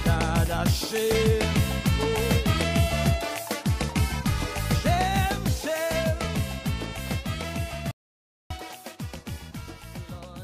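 At 7.91 s there is a playback stall, likely from the player running short of buffered data or its thread being blocked. Output drops to silence for about 0.59 s, cutting the sound off mid-flow until it resumes at 8.51 s.

From 8.51 s to the end at 10.43 s comes catch-up at higher speed: the player resamples its backlog to recover the lost time. Everything runs 1.1 times faster and sits about a semitone and a half sharp, audibly rushed and raised in pitch.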